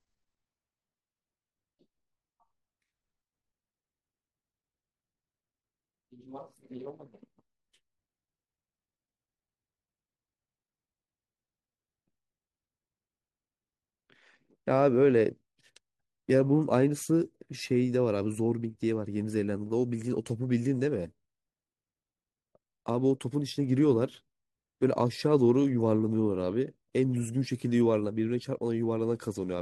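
Nothing stood out on listening to this recording of speech.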